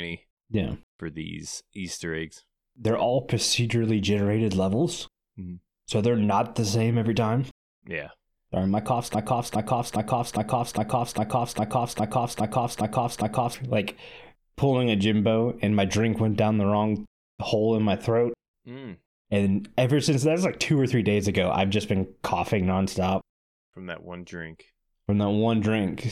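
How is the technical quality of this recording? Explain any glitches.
The recording has one serious glitch. From 9.15 to 13.54 s, just after "my cough's", a broken-record loop repeats a 0.41 s fragment eleven times. It was likely a stalled player or stream resending its last buffer, and the missing speech is lost. A waveform or spectrogram shows identical blocks tiled end to end.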